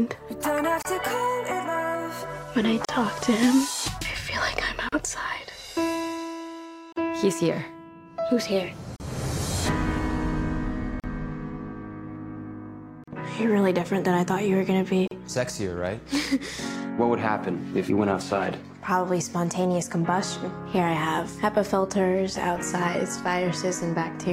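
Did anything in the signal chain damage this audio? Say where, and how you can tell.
Yes. Brief 30–38 ms silences with smeared edges cut through continuous sound every 2 s, at 0.82, 2.85, 4.89, 6.93, 8.96, 11.0, 13.04 and 15.08 s. These are gaps at the joins of encoded pieces: separately encoded 2 s segments were joined untrimmed, so the encoder delay and final-frame padding remain.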